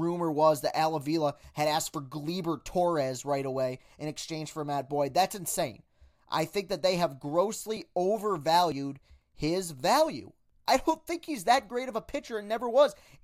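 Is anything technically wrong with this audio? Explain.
Yes. The speech has two abrupt jumps, at 7.77 s and 8.72 s. The first comes just after "think that they have". Each is a jump with the sound skipping forward and no gap. This is likely a dropped buffer (overrun). The recording software did not collect samples before the hardware overwrote them. The missing piece vanished and its edges were joined. About 10 ms is lost at the first point. About 40 ms is lost at the second.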